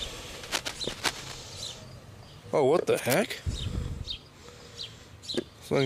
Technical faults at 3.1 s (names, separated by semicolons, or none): cable scratch noise